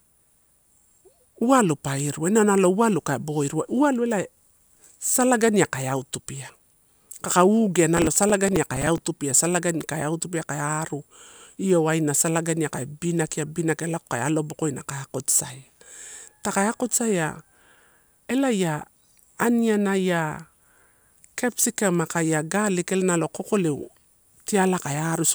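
Just after "kaka ugea" (7.97–9.02 s), gritty crackle tears through the speech: processor overload crackle, with dozens of roughly 5 ms buffers missing their deadlines and replaying old audio.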